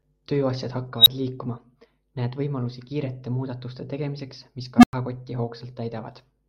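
At 0.98 s and again at 4.78 s, an unstable filter runs away: a tone near 4 kHz, then a low one around 200 Hz, swells within 79 and 55 ms, clips, then drops to silence for 11 and 99 ms. Unlike acoustic feedback, it ends abruptly once the numbers overflow.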